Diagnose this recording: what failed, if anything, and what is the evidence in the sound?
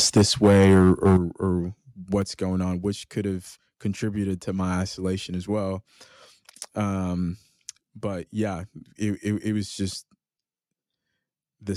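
From 0.16 s to 1.17 s the speech has a harsh, crackling edge on its loudest syllables, with peak tops squared off rather than rounded. This is microphone overload at the converter stage, with the input likely set too high for the signal. Peaks reach about 9 dB beyond full scale, so the converter flattens them at its limit, and around 7 percent of samples in that stretch are clipped, producing the added distortion.

The level drops abruptly twice, voice and background together: by about 3 dB at 0.18 s and by about 9 dB at 1.17 s, where the distorted stretch ends. This is the microphone volume being stepped down in the call processing stage, likely by automatic gain control that detected the overload and cut the device's input gain in discrete jumps rather than a smooth fade, so each correction is heard as a sudden step.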